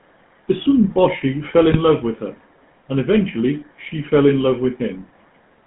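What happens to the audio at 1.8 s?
Right around there, from about 1.72 to 1.79 s and just before "love with her and", there's a burst of GSM bit errors. Corrupted bits got into the decoder's filter, pitch and gain parameters, so for a few frames it rebuilt the sound from wrong values. You hear a short squawky, gargled pop where the spectrum bends and the level jumps. It lasts about 70 ms, which fits roughly three damaged 20 ms frames.

Underneath that, the whole clip runs through the GSM full-rate codec at 13 kbps. It models the vocal tract and drives it with a sparse, regularly spaced pulse excitation, which gives the sound its buzzy, gravelly edge. The band is narrow, about 150 Hz to 3.4 kHz, so the top end is gone and everything sounds boxed-in and telephone-like. The codec damage is plainly audible, so the errors at 1.8 s land on already rough audio.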